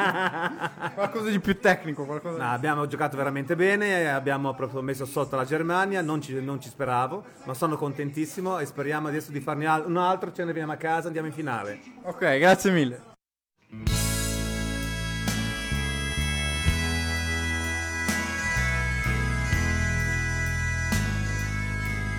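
No technical faults can be heard anywhere in the recording.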